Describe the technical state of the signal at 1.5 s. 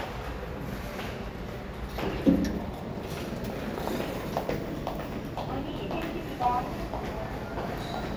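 At 1.5 s the signal is intact, with no dropout, clipping, glitch or other audible fault.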